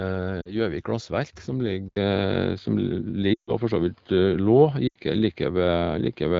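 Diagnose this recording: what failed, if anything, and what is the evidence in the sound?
Brief warbles and drop-outs occur at 0.42 to 0.56 s, 3.34 to 3.53 s and 4.88 to 4.98 s. The longest drops quickly to near silence before recovering roughly. These are lost AMR speech frames: radio errors failed the checksums, and the decoder extrapolated from the last good frame with falling gain, concealing about 40, 140 and 80 ms.

From 1.88 s the speech turns dull and boxy, with nothing above 5 kHz. It follows an 80 ms silence and comes with a level shift of a few dB and a faint new noise floor well below the speech. That points to the input likely being switched to a poorer device at the driver stage.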